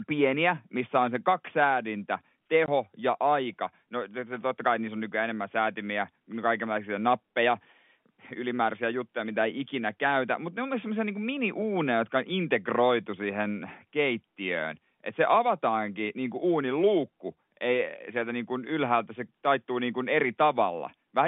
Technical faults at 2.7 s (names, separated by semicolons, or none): packet loss filled with silence